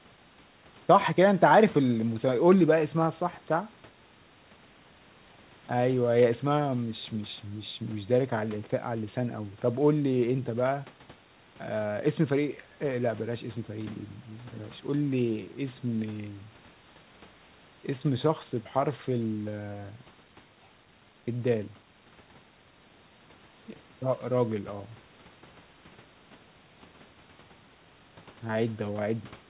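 No technical faults are audible.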